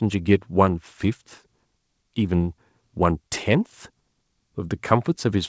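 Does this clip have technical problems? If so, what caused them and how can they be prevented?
No, the speech shows no technical faults; it carries the normal character of a call path through the call microphone processing and a G.722 call connection at 64 kbps, which leaves nothing above 8 kHz.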